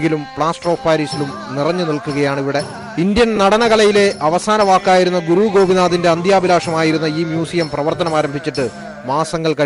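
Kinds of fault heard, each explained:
Lost LE Audio frames: at 3.36 to 3.38 s, about 15 ms of audio goes missing, which points to a couple of dropped Bluetooth LE Audio frames. The LC3 decoder hides each gap by replaying the last spectrum it received with its phases scrambled, so the sound is briefly replaced by a short noisy smear. The gap is short enough that the concealment never fades into silence, and normal audio resumes right after.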